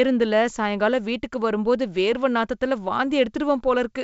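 The speech has the roughly 7 kHz bandwidth of G.722 wideband telephone coding, consistent with its full 64 kbit/s mode, and no technical fault can be heard anywhere in the audio.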